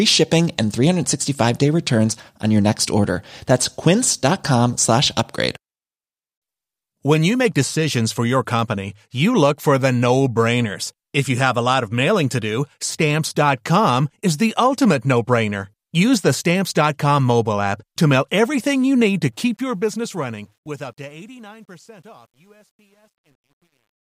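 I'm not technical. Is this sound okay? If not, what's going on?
No. The speech fades out from about 19.3 s to the end, but from 19.32 s the tail has truncation distortion on a fade. The volume was lowered using too few fine steps, which fits about 10 bits, so the sound turns gritty, worst from 21.07 s to 24.06 s, instead of simply getting quieter.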